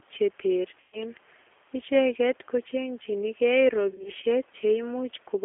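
The whole clip runs through a G.729 codec. Speech is squeezed into a telephone band of about 300 Hz to 3.4 kHz. A pitch predictor and sparse pulses rebuild each frame, which fits an 8 kbit/s G.729A coder. The result sounds plainly rough and synthetic.

From 0.80 to 0.99 s there is VoIP packet loss concealed by the speech codec. The decoder stretches its last frame into a tone or coloured noise that fades. This fits about 130 ms of lost packets. From 3.91 to 4.10 s, after "ko chengchini gei", shorter dropouts spread across 160 ms. The longest is 40 ms. The voice stays weak until frames rebuild.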